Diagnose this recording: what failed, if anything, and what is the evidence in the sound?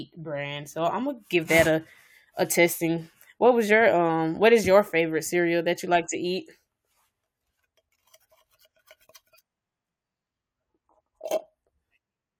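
Nothing failed in this recording, and the sound shows no evidence of a fault at any stage.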